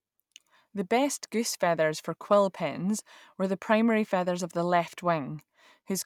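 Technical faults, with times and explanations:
No technical faults can be heard in this recording.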